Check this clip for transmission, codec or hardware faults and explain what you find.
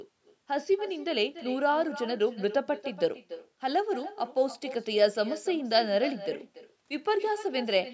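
One fault runs through the whole clip: echo with no canceller. From start to finish, every stretch of speech is followed about a third of a second later by a fainter copy, about 15 dB down. The far end is playing the call over a loudspeaker, its microphone picks that playback up, and nothing subtracts it before it returns across the network. The copy sounds thin. On a waveform, each burst of speech trails a smaller echo of itself. On a spectrogram, every pattern repeats as a dimmer, time-shifted ghost, all of it cut off above 8 kHz by the call's microphone processing.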